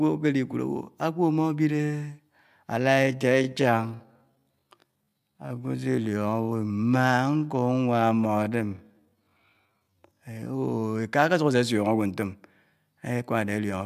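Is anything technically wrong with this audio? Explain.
Yes, there are two problems. From 2.77 to 10.53 s there's a time-stretched section: the speech drops to roughly 0.59 times normal speed while the pitch holds. That's likely software padding the audio out to a target length by repeating short slices, so the pace sags suddenly and the speech drags. Then at 13.74 s there's a block of digital silence lasting just 0.67 ms, which fits a 32-sample block being zeroed, probably an output buffer that wasn't filled in time. With no fade in or out, the abrupt drop to silence and back comes across as a quick tick.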